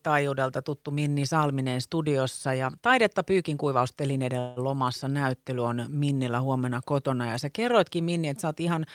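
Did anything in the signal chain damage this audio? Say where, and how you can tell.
Yes. The damage sits at the network stage, as a call audio freeze from 4.39 to 4.59 s. The speech stops moving forward there. The last sound is stretched into a fading buzz for about 170 ms instead of falling silent. Then the speech resumes exactly where it left off, with nothing skipped. Everything after that point is shifted about 170 ms later. The likely cause is packets held up in transit, leaving the jitter buffer empty until they arrived.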